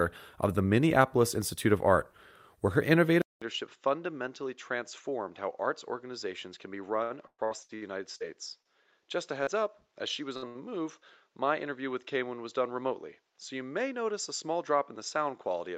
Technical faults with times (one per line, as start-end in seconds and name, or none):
3.22-15.78 input switched to a poorer device
7.03-8.23 repeated packet loss (robotic sound)
8.62-8.68 short stall from a late packet
9.43-9.50 short concealed packet loss
10.37-10.58 burst of packet loss